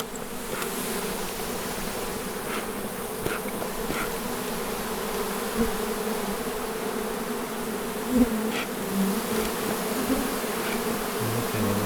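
From 1.01 s to 3.91 s a call bitrate drop sets in: the encoder is starved of bits and codes the sound coarsely and muffled, consistent with a fall from around 64 to 15 kbps, worst for about 1.1 s. Unlike packet loss, nothing drops out or stutters.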